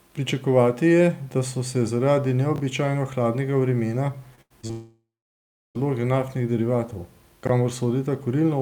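Speech, with two kinds of transmission damage and a short reordering glitch in two places. The chunks out of order fault appears at 2.56–2.60 s, right after "da so se zaradi" and before "hladnega vremena", and again at 7.45–7.49 s, just after "naftnih derivatov". Each time, a piece of audio plays one position later than it should, which fits 20 ms chunks being swapped with their neighbours. Nothing is missing, but the sound jumps backwards and forwards. On the waveform, three sharp discontinuities sit within about 40 ms, and on the spectrogram thin vertical click lines cut through the harmonics. From 4.35 to 4.71 s, following "hladnega vremena", repeated packet loss (robotic sound) breaks the signal up. There are four separate holes, the longest about 87 ms, and roughly 140 ms of audio is gone in total. Concealment fills the holes by extending the previous sound, so about 41% of that stretch is synthetic and it comes across as choppy. 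A spectrogram shows smeared, frozen harmonic bands with abrupt restarts between them. A long network dropout follows directly from 4.71 to 5.77 s, with about 1.04 s of audio missing. The last sound is stretched into a fading buzz or hiss, then roughly 0.69 s is silent before the audio resumes mid-stream. This was likely caused by the connection stalling completely. On the waveform it shows as a tapering tail followed by a flat line, and on the spectrogram as a decaying smear followed by a blank band.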